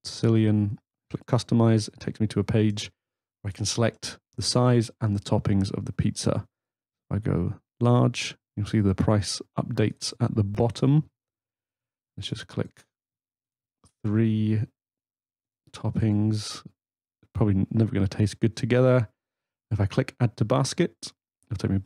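A repeated buffer at 10.55 s: a chunk of roughly 1.5 ms, which fits a 64-sample buffer, replays twice, giving a brief click-like buzz as late audio drops out.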